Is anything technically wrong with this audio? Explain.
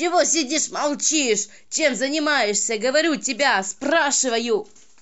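No, no technical faults.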